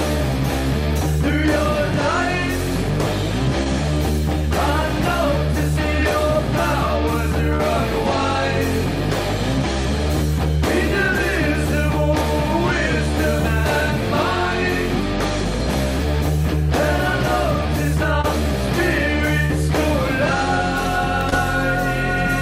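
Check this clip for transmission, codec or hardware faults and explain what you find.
There are two faults: repeated short concealed packet loss, and a half-second stretch that points to a stuck bit.

Short concealed packet loss occurs five times: 3.63 to 3.67 s, 7.55 to 7.61 s, 18.21 to 18.25 s, 19.45 to 19.52 s and 21.30 to 21.34 s. Blocks of 20 ms or 40 ms arrived too late for the decoder. Each time, the receiver covered the hole by extending the preceding sound, repeating its pitch where it was periodic and filling with shaped noise where it wasn't, before blending back into the real signal. Each gap is heard as a brief smear or wobble, and a short transient falling inside one can disappear.

From 13.20 to 13.70 s the waveform is pushed off its true values in a pattern that follows the signal itself, and the likely cause is a stuck bit. That is a single data bit held at 0 or 1 by a failed line or converter. 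Roughly half the samples then carry an error equal to that bit's weight. Because the bit also flips with the sign of small values, quiet moments within that half second pick up noise. The result is either grainy noise or buzzy distortion, depending on which bit is affected.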